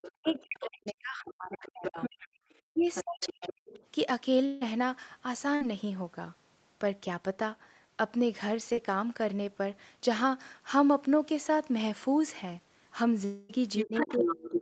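Speech from a call, carrying several echo-canceller and network faults. Speech is suppressed in double talk from 0.0 to 2.15 s and again from 2.73 to 3.53 s, where the talker's level falls by roughly 40 dB in places. It happens once more from 13.84 s to the end, with a shallower drop of about 20 dB. The likely cause is the echo canceller hearing both sides at once and, unable to separate the talker from the loudspeaker echo, turning everything down. On a waveform this shows as the envelope caving in or breaking into fragments. On a spectrogram the upper harmonics thin out or whole stretches go pale. Alongside this, the other side's voice leaks through: faintly from 0.03 to 0.93 s at about 20 dB below the talker, more clearly from 1.62 to 2.28 s and 2.81 to 3.8 s at about 10 dB below, and strongly from 13.78 s to the end at about 5 dB below. The likely reason is echo the canceller did not remove. 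It appears as a second set of harmonic traces interleaved with the main speech. Two long network dropouts cut in at 4.45 to 4.63 s and 13.25 to 13.51 s, losing about 160 ms and 240 ms of audio. These are likely gaps in arriving packets, papered over by the receiver continuing the last sound. The result is a smeared buzz or hiss that decays rather than true silence, and a spectrogram shows frozen, fading horizontal bands before the audio resumes with material missing. A burst of packet loss at 5.55 to 5.63 s removes about 60 ms, heard as the last sound briefly held and fading. It looks like a short stretch of flat, repeated spectral texture with a dipping waveform. A short concealed packet loss at 8.73 to 8.79 s replaces about 40 ms with synthesized continuation. It sounds like a quick wobble or smear and shows as a tiny discontinuity where the harmonics briefly stiffen. Across the clip, nothing appears above 8 kHz, the ceiling of the Opus call path.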